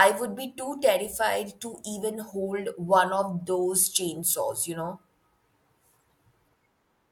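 Nothing in this bit of speech goes wrong technically; there's simply no fault to point to anywhere in it.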